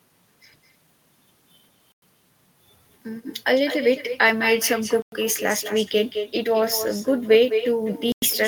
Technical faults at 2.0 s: echo with no canceller; gap between chunks

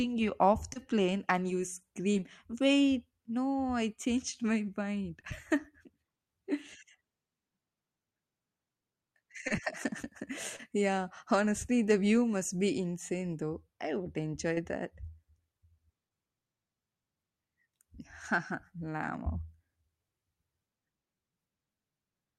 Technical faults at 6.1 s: none

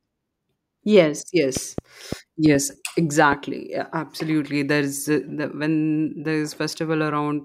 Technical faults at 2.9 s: train of clicks

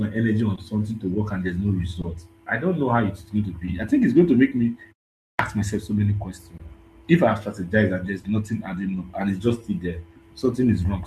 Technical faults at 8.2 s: clock drift between sender and receiver; short stall from a late packet

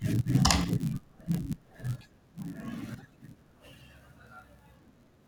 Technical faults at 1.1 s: block size mismatch (padded)

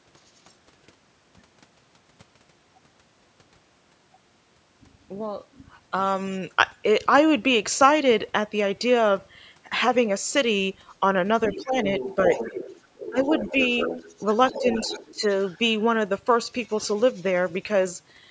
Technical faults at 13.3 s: other side's voice leaking through; speech suppressed in double talk

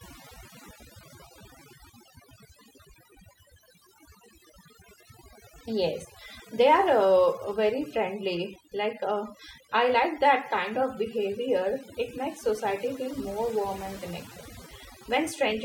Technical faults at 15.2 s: overdone noise removal

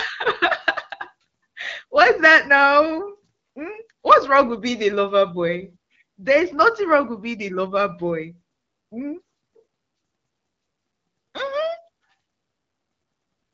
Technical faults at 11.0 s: none

